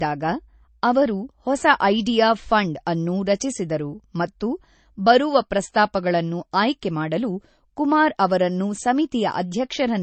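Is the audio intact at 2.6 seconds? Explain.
No. At 2.6 s, as throughout, the speech sounds dull, with nothing above 8.3 kHz. This is likely low-bitrate audio saved at a high bitrate: the re-encode cannot restore the cut-off, which fits an original encoding near 32 kbit/s.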